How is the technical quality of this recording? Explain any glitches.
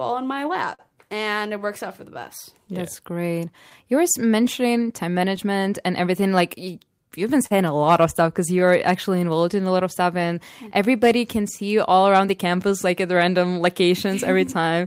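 The speech is marred by network timing faults, with small hiccups recurring through the whole clip.

Clock drift between sender and receiver: the sender's clock runs about 4% slow throughout, so the receiver's buffer keeps draining. This shows as uneven timing irregularities across the waveform.

Repeated timing corrections, from 0.34 to 14.63 s: the receiver stretches playback to 97% speed, adding roughly 0.4 s in uneven small steps. The result is a faintly unsteady tempo, with smeared spectrogram harmonics at each edit.

Short stall from a late packet, 7.46 to 7.53 s: the buffer ran empty, so the receiver held the last sound for 42 ms. You hear a brief held sound with a slight buzz or dip, and the spectrogram shows a flat, frozen band.

Scattered short gaps, 0.15 to 5.39 s and 11.57 to 13.49 s: about seven and then about three late packets were patched by continuing the prior sound. The longest is around 40 ms. 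They are heard as ticks or smears, with small waveform discontinuities.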